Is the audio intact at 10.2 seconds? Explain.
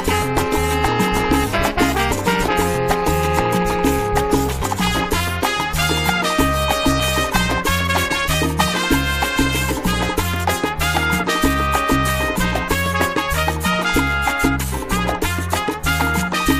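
Yes, the audio is intact at 10.2 seconds, with no dropout, click, distortion or other fault to be heard at that moment.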